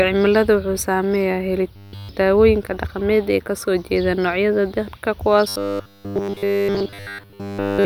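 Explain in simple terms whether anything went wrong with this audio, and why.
The speech turns into robotic sound from repeated short buffers from 1.76 to 2.09 s, just before "dawooyinka dhaqameed", and again from 5.48 s to the end. A tiny slice of sound, likely about 10 ms, loops over and over, forcing a flat 100 Hz buzz. Unlike a stutter, no recognisable piece of speech repeats.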